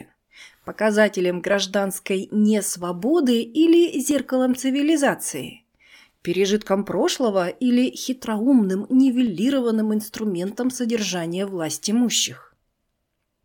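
Speech carrying a regular click roughly every 1.29 s, from 0.24 s to 13.14 s, about ten in all. These are clock drift buffer slips, likely from two devices running on separate clocks that disagree by a few hundred parts per million, so the buffer between them periodically drops or repeats a small block of samples, around fifteen each time. The strict, even spacing separates this from packet loss or random dropouts, which land irregularly.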